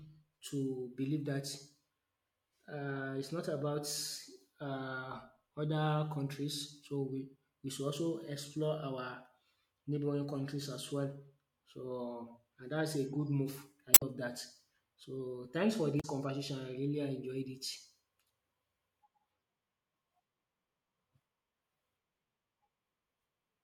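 Damaged data in the compressed stream of this speech recording throws the decoder out of sync at 13.91–14.03 s and 15.97–16.05 s, producing brief glitches.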